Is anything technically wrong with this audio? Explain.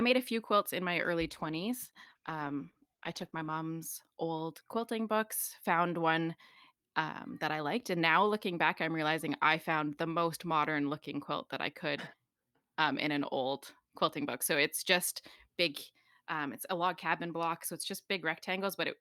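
Yes, there's a call bitrate drop from 1.24 to 3.63 s: the bandwidth estimate collapsed, the encoder starved, and the speech goes coarse and muffled, consistent with falling from around 64 to 14 kbps.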